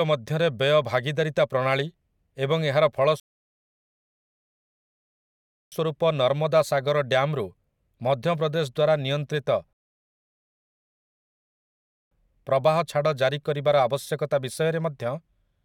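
The player runs out of downloaded audio twice and halts until more data arrives, producing a rebuffering stall each time. From 3.20 to 5.72 s, right after "ଭାଗିଦାରିତା ପ୍ରଣାଳୀ ଏବଂ ଏହାର", the speech drops to silence for about 2.5 s, then picks up exactly where it stopped with "ନର୍ମଦା ସାଗର". A second stall runs from 9.73 to 12.11 s, adding 2.38 s of silence. Nothing is lost either time. The gaps only stretch the clip.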